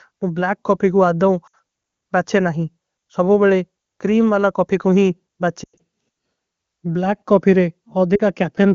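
Lost AMR speech frames occur at 1.47–1.55 s, 5.63–5.80 s (the longest run about 100 ms) and 8.15–8.21 s. The decoder repeats the last good settings at falling gain, so speech smears briefly and dips, showing as blurred, fading harmonics and a shrinking waveform envelope.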